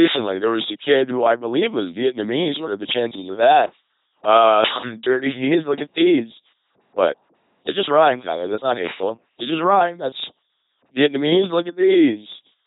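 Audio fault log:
throughout, LPC-10 vocoder: the speech has been squeezed through a very low-rate parametric coder that keeps only a short all-pole filter shape and a simple excitation, either a pulse train or noise, chosen wholesale for each moment. The result is a heavy, buzzing, mechanical robot voice, with buzz or hiss appearing wherever the voiced/unvoiced choice misfires, and nothing above 3.9 kHz, a damage level that fits a 2.4 kbit/s LPC-10 stream.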